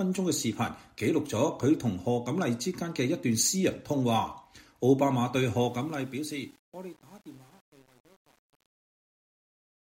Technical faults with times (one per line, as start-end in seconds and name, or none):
5.62-9.82 truncation distortion on a fade